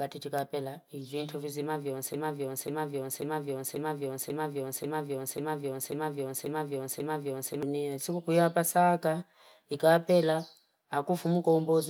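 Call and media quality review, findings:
Broken-record loop, 2.14–7.63 s after "chikapila iviento visima vyonse": a 540 ms speech fragment repeats ten times back to back; likely a stalled player or stream resending its last buffer, with the speech in between lost.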